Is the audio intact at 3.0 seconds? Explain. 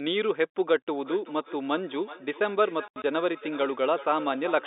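No. Packet loss filled with silence hits from 2.88 to 3.04 s. Across those 160 ms about 100 ms of sound is missing, in scattered gaps whose longest run is 80 ms. The receiver never got those stretches and played nothing in their place, so the sound is chopped by short holes with abrupt edges. The gap lengths come in steps that fit 20 ms packets.

The same moment also carries feedback echo between two devices, running from 1.0 s to the end. A second device in the room replays the call, its sound reaches the first microphone again, and the echo canceller cannot remove what it did not play itself. Each sound therefore returns roughly every 0.4 s, thinner and ringing, peaking about 16 dB below the direct sound.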